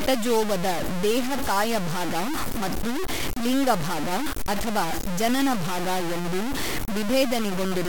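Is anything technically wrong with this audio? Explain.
Yes. Throughout the speech, grainy distortion follows the voice, most likely low bit depth without dither, consistent with samples truncated to about 3 bits. The error tracks the signal and is nearly as loud as the speech itself. Quiet passages drop out or sputter rather than sitting under steady hiss as dithered noise would.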